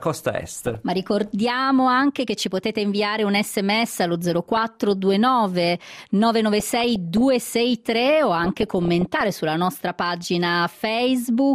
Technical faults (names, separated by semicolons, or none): DAB burbling